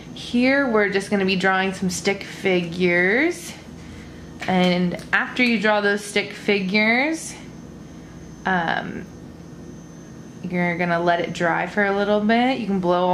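Nothing in this audio stood out as a technical problem on listening.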